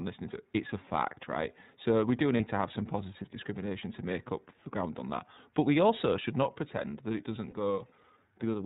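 From start to finish the speech runs through the iLBC codec. Everything above 4 kHz is gone, and the rough, slightly synthetic texture fits its 13.33 kbps, 30 ms frame mode.

Lost iLBC frames come at 2.37–2.45 s, between "we do" and "to have some positive", and at 7.50–7.54 s, after "pretend that it doesn't". Each gap sounds like about one 30 ms frame that the decoder filled with a repeated buzzy pitch cycle, and then it recovers straight away.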